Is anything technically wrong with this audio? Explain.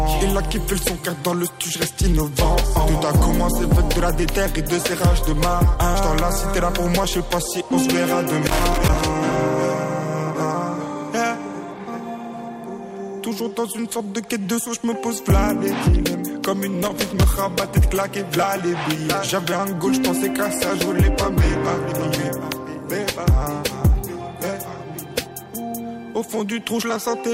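Yes. Loose connector crackle appears from 8.47 to 9.01 s and again from 16.83 to 17.23 s: a worn contact repeatedly breaking and remaking the signal path, chopping the sound into irregular scratchy bursts. On a waveform these show as ragged dropouts and spikes; a spectrogram shows broadband vertical streaks.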